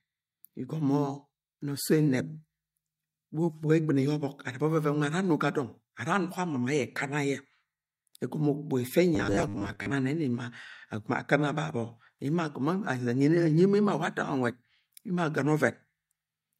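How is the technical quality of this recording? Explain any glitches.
One glitch stands out. Robotic sound from repeated short buffers occurs from 9.15 to 9.94 s. Audio likely arrives too seldom, so about 10 ms gets replayed over roughly half the stretch, imposing a fixed 100 Hz pitch: a rigid, metallic buzz loosely following the speech.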